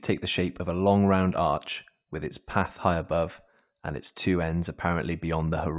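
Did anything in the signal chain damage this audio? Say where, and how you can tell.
No, nothing in this speech stood out on listening as damage from any stage of the signal chain.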